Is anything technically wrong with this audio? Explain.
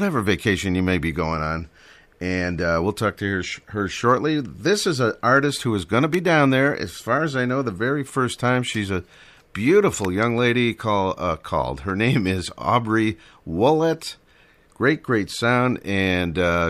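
Yes. Two electrical switching spikes occur, at 6.14 s, after "who is going to", and at 10.05 s, before "young lady call uh". Each is a sharp snap, peaking fairly high at roughly -10 dBFS, sitting on top of the speech. It is likely caused by a nearby switch or discharge arcing into the audio line.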